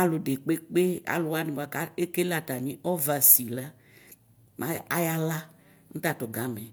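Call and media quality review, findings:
No faults found in the speech recording. Nothing to raise against any component for this segment.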